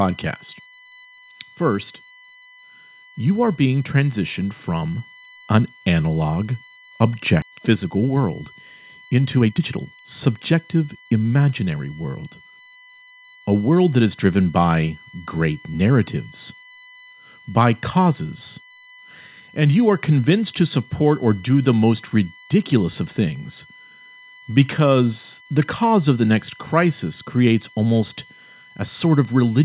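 Speech heard over a narrowband call path, with nothing above 4 kHz, which points to a G.711 A-law link at 64 kbps. A USB whine runs through the whole clip. It is a fixed tone at 1 kHz with its strongest component at 2 kHz, about 25 dB below the speech. On a spectrogram it shows as thin, unbroken horizontal lines. It comes from the bus's 1 ms frame activity leaking into the audio through power or ground. At 7.42 to 7.44 s there is a skip ahead. Roughly a second of audio is missing, and the two sides are joined with no gap. The waveform shows an abrupt splice with no silence, and the spectrogram shows a hard vertical seam. It happens when audio is dropped in transit or discarded by the jitter buffer so it can catch up. Straight after, from 7.52 to 11.21 s, a jitter buffer speed-up makes the speech run at about 115% speed while the pitch stays unchanged, so it sounds hurried. The receiver trims short pitch-period pieces, about half a second in total, to shrink its backlog. 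The waveform looks slightly compressed in time, while the harmonic spacing on the spectrogram stays the same.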